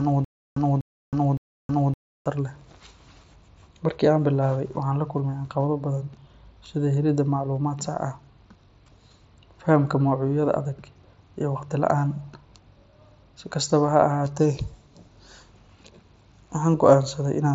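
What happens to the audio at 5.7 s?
Nothing goes wrong at 5.7 s: the speech carries on intact through the Bluetooth mSBC headset path, with no dropout, click or other fault at that moment.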